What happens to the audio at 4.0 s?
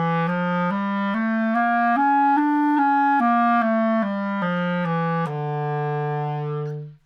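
Nothing goes wrong at 4.0 s: the sound plays through that moment intact, with no dropout, click or other fault.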